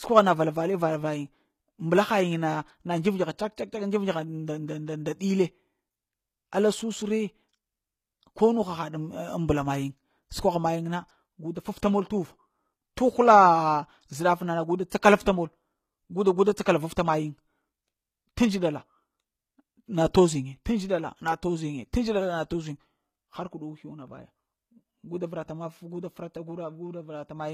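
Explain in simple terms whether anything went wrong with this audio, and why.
From start to finish the s sounds come out gritty and metallic, with nothing above 15 kHz. That's likely HE-AAC compression faking the treble from copied lower frequencies.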